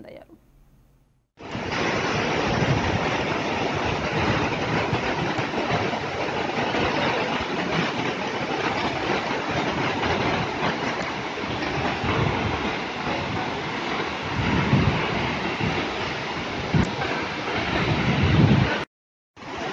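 Damaged data in a compressed stream appears four times, at 1.48 to 1.52 s, 5.35 to 5.39 s, 10.99 to 11.03 s and 16.81 to 16.86 s, each lasting about 40 ms. At each point the decoder meets corrupted bytes, misreads or discards the frames there, loses sync and hunts for the next valid frame header. Each event is heard as a brief chirp or blip that interrupts the sound before normal playback resumes.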